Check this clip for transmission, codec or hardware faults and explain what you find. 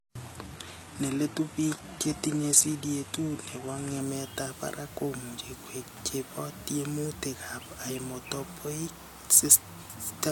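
One fault: an adaptive stream starting at a low bitrate. From 0.0 to 4.0 s the player began on a low-bitrate version, consistent with about 16 kbit/s HE-AAC, so the speech loses its real treble and carries heavier codec artefacts. At 4.0 s it steps up, seemingly to around 96 kbit/s AAC-LC, and clarity improves abruptly with no gap.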